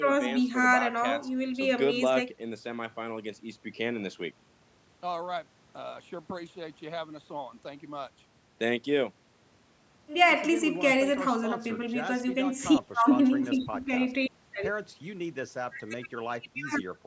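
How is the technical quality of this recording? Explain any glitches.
The technical quality of this recording is sound, with no glitches to explain.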